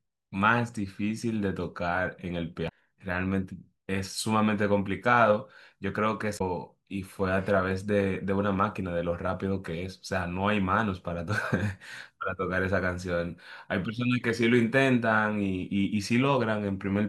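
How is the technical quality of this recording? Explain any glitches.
Two short glitches in the speech come from damaged data in a compressed stream, at 2.65 to 2.72 s and again at 6.37 to 6.41 s. In each spot, bytes in the encoded stream are corrupted, so the decoder cannot read the frames properly, loses its place and has to hunt for the next valid frame header. What reaches the ear is a brief chirp, squawk, click or short hole, about 60 ms and 40 ms long, cutting abruptly into the speech.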